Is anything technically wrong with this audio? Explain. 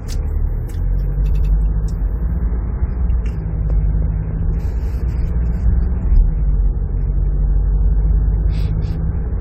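Yes. From 1.31 to 1.50 s there are repeated frames: a 92.9 ms stretch of the audio is played two extra times, so the sound stutters, looping that same fraction of a second before moving on. The stream, not the source, went wrong: a block of compressed data, which fits about four frames, was written or delivered more than once, and the decoder faithfully played every copy. Unlike a dropout or glitch, nothing is missing; instead identical material recurs, and the clip runs 185.8 ms longer.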